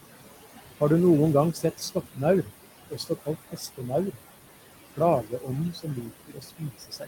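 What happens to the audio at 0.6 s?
At 0.6 s the speech carries noise suppressor artifacts, present across the whole clip. The suppressor pulls steady-noise bands down by about 18 dB frame by frame, so the room noise, about 11 dB below speech, sinks between the words and rises under them.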